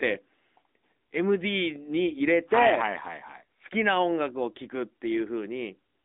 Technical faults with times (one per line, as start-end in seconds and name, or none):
0.00-6.05 AMR narrowband mobile codec